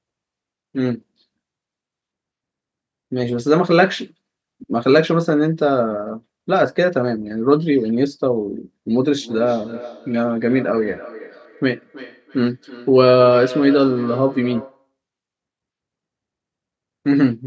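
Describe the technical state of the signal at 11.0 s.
At 11.0 s the speech carries feedback echo between two devices, running from 9.2 to 14.9 s: a second device replays this microphone's audio, which is picked up again, so each word returns about every 300 ms at around -16 dB, thinner and ringing. A spectrogram shows faint, evenly spaced trailing copies of each syllable.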